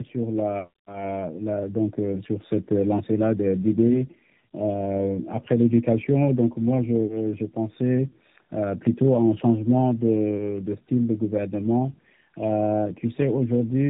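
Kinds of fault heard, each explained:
Tandem speech coding, throughout: two speech codecs in a row, the second re-coding the first's damaged output, leaving rough, warbly, muffled speech with nothing above 3.8 kHz.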